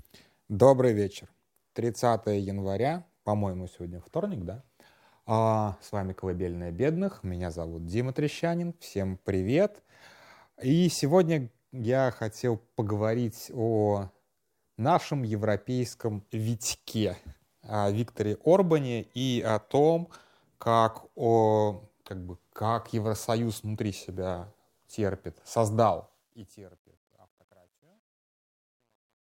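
Truncation distortion on a fade runs from 25.84 s to the end at 29.24 s in this speech clip, beginning just after "внутри себя терпит". The fade-out starts at 25.84 s. Its gain ramps down smoothly, but the stage applying it keeps too few bits and adds no dither, which fits roughly 11-bit resolution. From 26.88 s to 29.24 s the waveform collapses into coarse steps, so the tail turns gritty.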